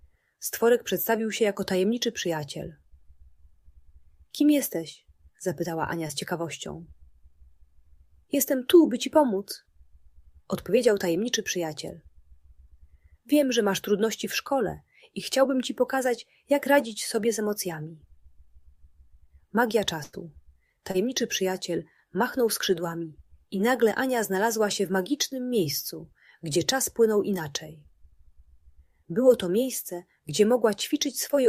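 A couple of quick short concealed packet losses, at 6.07–6.11 s and 20.91–20.96 s, where the receiver patched 20 to 40 ms gaps by extending the previous sound, leaving a little smear or wobble. At 20.03–20.15 s there's a burst of packet loss: about 100 ms went missing, bridged by a fading continuation before the audio jumps ahead.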